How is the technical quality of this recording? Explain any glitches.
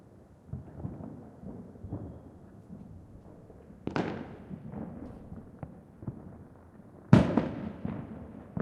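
No glitches or dropouts heard.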